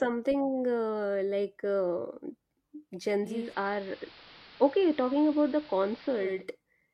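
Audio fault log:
3.20–6.49 s: digital radio blending to analogue. The receiver lost the digital stream and cross-faded over about 345 ms to the AM broadcast, so the treble is cut back, the level drops about 1 dB, and hiss comes up, roughly 25 dB below the speech, until the blend back.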